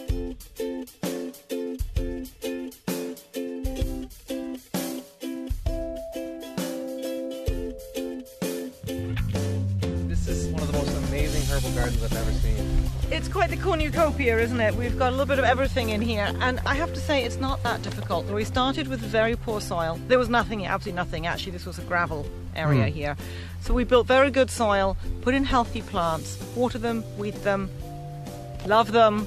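No technical faults can be heard anywhere in the recording, and the signal stays steady and intact throughout.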